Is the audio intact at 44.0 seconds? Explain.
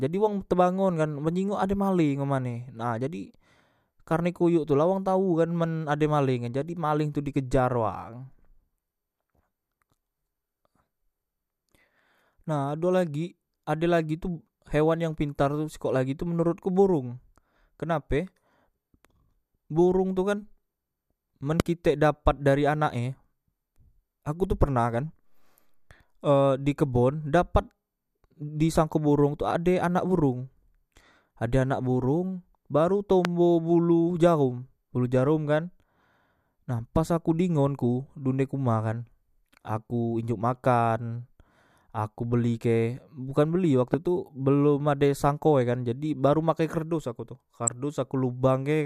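No, there's a loud pop right at 43.94 to 43.96 s, just before "tu belom", likely a voltage spike from a switch or static, thumping well above the speech.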